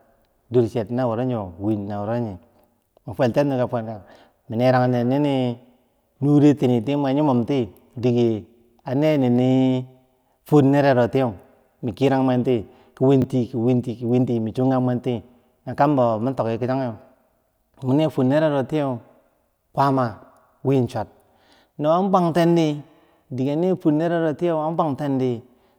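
At 13.22 to 13.24 s, fresh audio failed to reach the output in time, so the device replayed its last 20 ms block once, a repeated buffer. The doubled slice joins abruptly at each end, giving a brief click-like stutter, and about 20 ms of real audio is lost.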